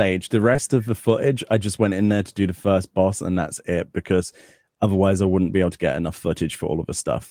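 At 0.53 s and again at 0.57 s, running to about 0.60 s, the speech has two back-to-back short concealed packet losses. Each time roughly 20 ms of audio failed to arrive, and the receiver patched about 12 ms of it by extending the preceding sound before crossfading into the real signal. Each comes across as a brief smear or wobble lasting a few hundredths of a second.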